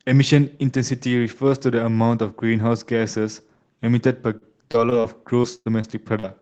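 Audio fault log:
4.37–5.06 s, repeated packet loss (robotic sound): Four short holes break up the speech, the longest about 39 ms. Each is patched by stretching the last sound forward. About 15% of this stretch is concealed, so it turns choppy.
5.42–6.25 s, repeated packet loss (robotic sound): Four more holes, the longest 100 ms. Again the last sound is repeated to fill each one. About 21% of this stretch is patched, so it sounds choppy and clipped, over the call codec's roughly 8 kHz band limit.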